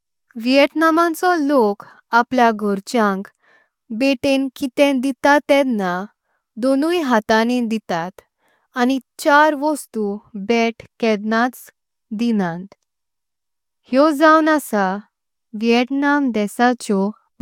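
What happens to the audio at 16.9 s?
Nothing goes wrong at 16.9 s: the speech carries on intact there, with no dropout, click, distortion or other fault to be heard at that moment.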